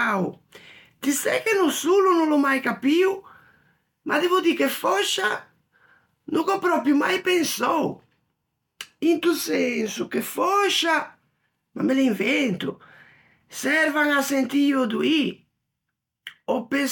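No technical faults can be heard anywhere in the recording.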